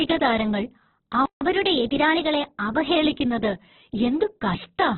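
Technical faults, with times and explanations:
Throughout: Opus compression, likely, at a very low bitrate somewhere around 8 kbps in its CELT music mode. Nothing comes through above 4.2 kHz, so the speech is squeezed into a narrowband telephone-like range and loses its airy consonants. With so few bits, the coder keeps each band's rough energy but fills in the detail with folded or noise-like content, so the voice sounds grainy and rough rather than swirly, and the damage is heavy.
1.26–1.41 s: playback stall, about 155 ms of dead silence cutting right into the middle of the speech. This is likely the player running dry of data, or its playback thread getting held up, so the output simply had nothing to send until it recovered. The sound then picks up again, which makes the gap stand out as an abrupt hole rather than a natural pause.
1.41–2.96 s: catch-up at higher speed, immediately after the stall. 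The player resamples its backlog to run at 1.1 times normal speed, so the speech hurries along and its pitch rises by about a semitone and a half. That makes the voice sound rushed for around a second and a half. Once the lost time has been recovered, both the speed and the pitch drop back to normal.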